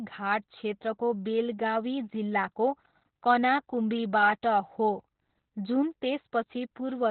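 From start to finish the speech carries heavy Opus voice compression. Nothing is present above about 4.2 kHz, so the sound is confined to a narrowband, telephone-like range, which points to the SILK linear-prediction coder working at a very low bitrate, around 8 kbps. With so few bits, the excitation signal is coded coarsely, and the voice comes across muffled, hoarse and faintly robotic, with sibilants and breath detail largely missing.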